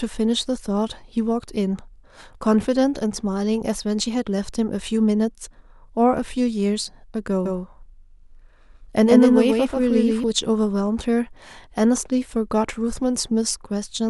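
From 7.46 s to 10.24 s the speech has a doubled audio track: a second, full-band copy trails the original by around 150 ms, roughly 5 dB quieter. It carries no decay or room colour, so it sounds like a flat, stuttering shadow rather than an echo, and it cuts in and out abruptly at both ends. The likely cause is the same signal reaching the mix twice, once through a slower path.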